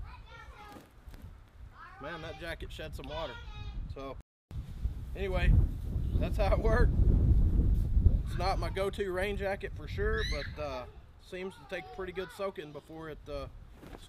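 Right at 4.21 s the sound cuts out mid-flow and stays silent for about 0.3 s, until 4.51 s, then picks up again. That's a playback stall: the player most likely starved for data or had its thread blocked, so output simply stopped until it caught up.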